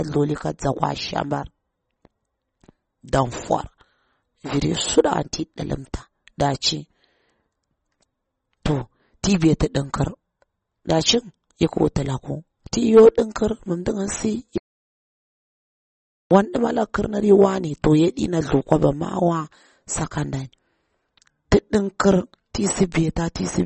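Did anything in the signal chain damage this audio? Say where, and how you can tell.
Yes. MP3 compression damage runs through the whole speech clip, at the codec stage. Nothing survives above 8.3 kHz, and plainly audible watery, swirling artefacts come from weak frequency lines switching on and off between frames. The likely cause is a starved encoder, consistent with about 32 kbps.

An audio dropout to silence runs from 14.58 to 16.31 s, about 1.73 s of silence with no room tone. The speech cuts off mid-flow and returns abruptly, likely because the input was lost while the recorder kept writing silence.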